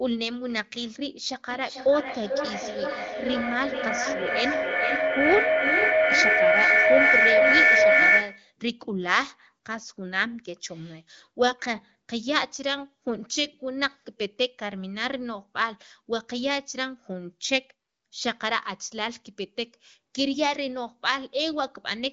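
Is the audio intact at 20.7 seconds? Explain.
Yes, the audio at 20.7 seconds is intact, with no fault audible at that moment.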